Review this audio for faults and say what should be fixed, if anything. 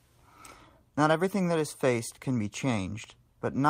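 Nothing stood out on listening, so there is nothing here that needs fixing.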